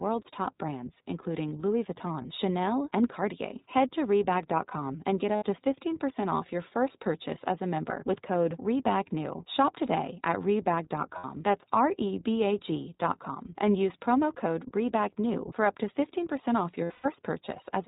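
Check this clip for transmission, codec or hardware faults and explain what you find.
Two faults are present: iLBC coding throughout the speech, and four bursts of lost iLBC frames.

iLBC codec, throughout: the band stops at 4 kHz, and the speech has a plainly audible rough, slightly synthetic edge. That points to iLBC at about 15.2 kbps with 20 ms frames. Each frame's excitation is coded on its own, which leaves a grainy texture.

Lost iLBC frames, at 2.22 to 2.26 s (20 ms), 5.36 to 5.45 s (60 ms), 11.18 to 11.25 s (60 ms) and 16.84 to 17.09 s: missing packets made the decoder repeat the last pitch cycle blended with noise. Each gap sounds like a briefly held, buzzy vowel, and the speech recovers almost immediately afterwards. The final burst is the longest, with 200 ms lost across 240 ms and a longest run of about a tenth of a second.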